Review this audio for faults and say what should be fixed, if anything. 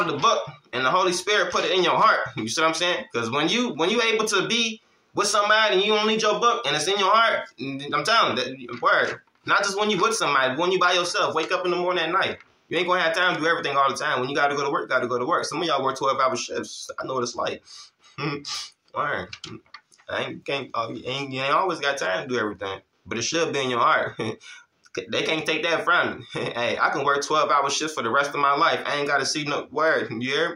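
No faults turn up in this audio, so nothing needs to be fixed.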